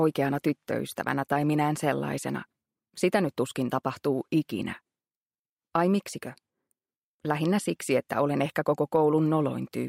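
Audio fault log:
No audible faults detected.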